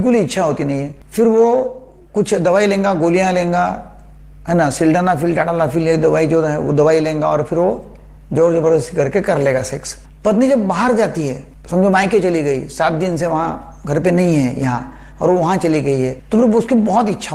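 There are no technical faults to describe in this audio.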